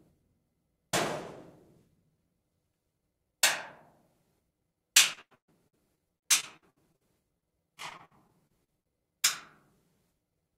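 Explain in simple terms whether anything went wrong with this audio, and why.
Repeated packet loss (robotic sound) occurs from 5.13 to 7.02 s and again from 7.38 to 8.92 s. Chunks of sound went missing, and each gap was patched by stretching the previous sound, which makes the audio choppy and robotic.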